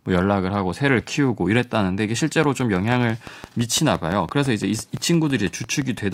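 From 2.44 to 5.99 s, regular ticking at about six per second rides over the speech: a train of clicks, likely from nearby equipment interference.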